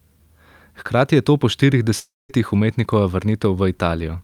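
A likely long network dropout stopped audio arriving at 1.99 s, just after "je to po štirih", until 2.31 s. The last sound is stretched into a fading buzz, then about 200 ms of near silence, and speech resumes with 300 ms lost.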